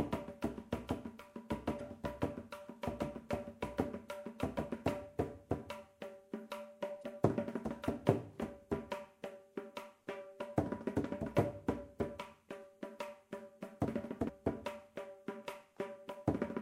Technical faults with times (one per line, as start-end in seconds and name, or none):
1.77-1.81 damaged data in a compressed stream
6.99-7.03 damaged data in a compressed stream
14.28 damaged data in a compressed stream